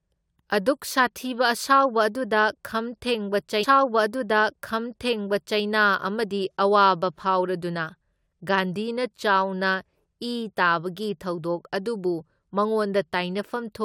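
It's a speech recording with a stream segment repeated: from 3.63 s to 5.61 s, a stretch of just under 2 s plays a second time, so you hear the same bit of speech twice in a row, with a small blip where playback jumps back. That points to the player fetching or queuing the same chunk of the stream twice, which ends up adding about 1.98 s to the running time.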